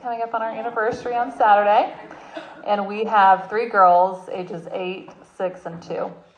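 From 3.01 to 3.07 s, a corrupt frame decoded gives a brief chirp or burst of noise peaking around -25 dBFS. Flipped bits in what sounds like one compressed frame were played anyway, scattering energy to wrong frequencies. A spectrogram shows a sharp-edged rectangular patch; the waveform, a short burst.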